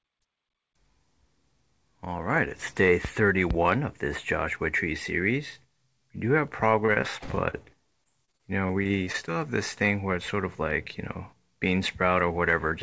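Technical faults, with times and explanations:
6.86–7.66 s, repeated packet loss (robotic sound): packets kept dropping, leaving seven short holes, the longest about 26 ms. Each was patched by stretching the preceding sound, giving a choppy, robotic texture.
8.04–9.33 s, repeated packet loss (robotic sound): ten more gaps, the longest about 20 ms, each filled by extending the last sound, so about 15% of this stretch is patched over and it sounds choppy and broken.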